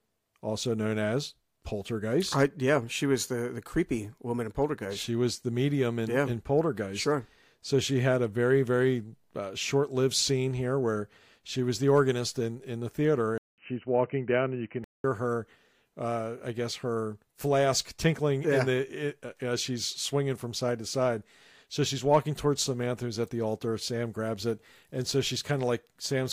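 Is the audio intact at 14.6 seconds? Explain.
No. From 13.38 to 15.04 s, between "in in the theater" and "her uh I guess", the speech turns dull and boxy with nothing above 3 kHz, after a 200 ms gap and over faint new background noise. This is likely an input switched to a poorer device.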